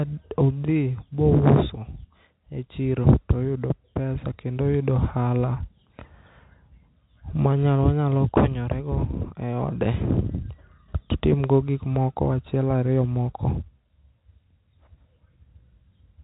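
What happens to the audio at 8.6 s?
At 8.6 s the speech is intact, carried through the G.711 telephone coding with its usual band limit just under 4 kHz and no fault at that moment.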